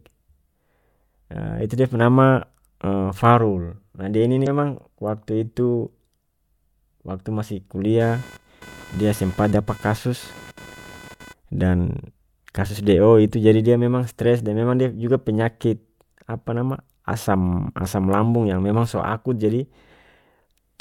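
A speech recording with two faults. From 4.43 to 4.47 s there is a brief glitch from damaged data in the compressed stream: the decoder misreads corrupted frames, loses sync and resumes at the next frame header. From 8.0 to 11.34 s, computer activity noise adds a buzz at roughly 500 pulses per second, around 20 dB below the speech. Because it follows processor or graphics load rather than the speech, it starts and stops independently of the talking, unlike mains hum.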